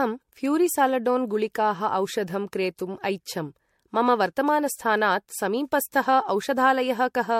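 Generation loss runs through the whole speech clip: the sound is swirly, smeared and hollow, with blurred attacks and nothing above 16.5 kHz, likely from around four successive MP3 passes at a rate near 64 kbit/s, each re-quantising on a shifted frame grid.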